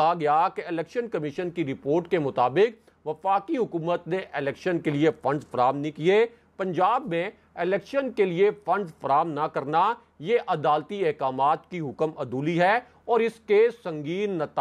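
Nothing stood out as a technical fault on listening.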